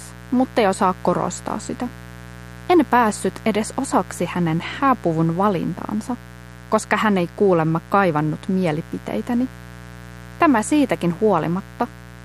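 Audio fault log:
Throughout: mains buzz. A steady, raspy buzz sits under the sound for the whole clip, around 20 dB below it. It is built on 60 Hz. Sharp switching spikes, twice per mains cycle, leak in and spread harmonics up to several kHz.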